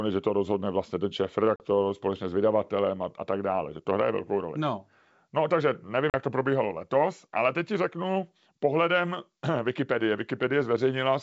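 A speech recording with two hard-edged gaps of about 40 ms, at 1.56 to 1.61 s and 6.10 to 6.15 s, where the sound drops abruptly to silence and resumes slightly distorted, settling within some tens of milliseconds. This is packet loss on an ADPCM call. A couple of packets went missing each time and were filled with silence, leaving the decoder's adaptive predictor and step size out of step with the sender's. The wideband G.722 coding around the gaps is clear.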